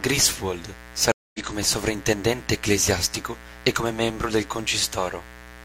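A mains buzz runs under the speech for the whole clip: a steady, raspy hum based on 60 Hz, sitting roughly 20 dB below the speech. Switching spikes, twice per mains cycle, leak in through a dimmer, rectifier or poor shielding, so the interference is a spiky buzz rather than a pure tone. On a spectrogram it shows as evenly spaced horizontal lines at multiples of 60 Hz climbing into the kilohertz range; the waveform carries a regular 120 Hz spike pattern between phrases.

At 1.12 s a stream reconnect cuts in. The connection dropped, the player went silent for about 0.22 s, then reconnected and started a fresh decoder mid-stream. By 1.40 s the audio resumes somewhere around a sixth of a second later than where it stopped, so a short stretch of speech is simply missing before "come sovrintendente ecclesiastico e". The waveform shows a flat gap followed by a brief fade-in, and the spectrogram shows a blank vertical band with a jump in the speech pattern on either side.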